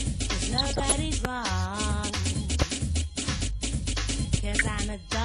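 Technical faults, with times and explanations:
Throughout: MP2 compression. The audio sounds dull and gurgling, with a granular roughness on the upper content. This is likely MPEG Layer II coding at a tight bit budget, consistent with roughly 80 kbps. Too few bits means the upper sub-bands are dropped or flicker in and out, and the bands that survive are quantised coarsely. That produces the muffled top end and the grainy texture.
0.58 to 0.96 s and 4.48 to 4.68 s: DAB burbling. Over these two stretches the sound picks up burbling artefacts layered on the programme. The first burst is longer than the second and hits more frames. The pattern points to weak-reception bit errors slipping past error correction, roughly half a percent in the first burst and somewhat less in the second. Corrupted samples put short blips of noise into single sub-bands, and corrupted scale factors make sub-bands jump in level for up to a frame.
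1.25 to 1.27 s, 2.62 to 2.64 s and 4.34 to 4.36 s: loud pop. Each is a single sharp pop about 25 ms long, peaking roughly 20 dB above the surrounding audio, with the programme continuing underneath. A sudden voltage step or pulse is likely added to the signal, for example from a switch, static discharge or a driver glitch. The following circuitry shapes that pulse into the short, hard transient heard here.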